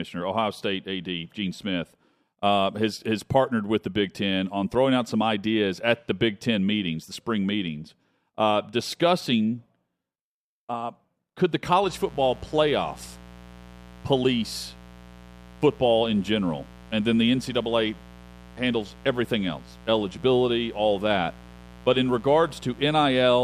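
From 11.83 s to the end at 23.44 s, a steady, raspy mains buzz sits roughly 20 dB below the speech. It comes from sharp spikes at 120 Hz, twice per 60 Hz cycle. On a spectrogram it shows as evenly spaced horizontal lines reaching several kHz. In the waveform it thickens the pauses.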